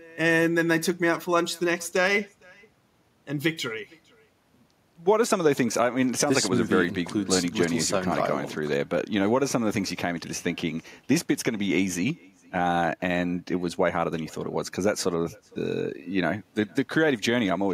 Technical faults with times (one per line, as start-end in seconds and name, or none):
0.00-17.73 echo with no canceller